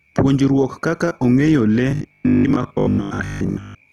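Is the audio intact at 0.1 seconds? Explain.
Yes, at 0.1 seconds the speech is intact, with no dropout, click or other fault to be heard at that point.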